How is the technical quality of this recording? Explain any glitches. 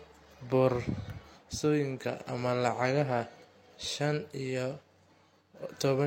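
The technical quality is limited by one fault that runs through the whole speech recording: low-bitrate audio saved at a high bitrate. The chain was likely a heavily compressed encode, consistent with something like HE-AAC at 32 kbit/s, later re-saved as a 256 kbit/s MP3. The generous second encode cannot restore detail the first discarded, so the speech keeps the artefacts of the low-bitrate pass, and the larger MP3 adds almost nothing.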